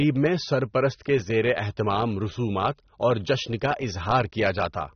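From start to finish the speech sounds dull and smeared, with a warbling, fizzy texture on sustained sounds and sibilants and nothing above 6.3 kHz. This points to AAC compression, likely AAC-LC at a low bitrate around 24 kbps.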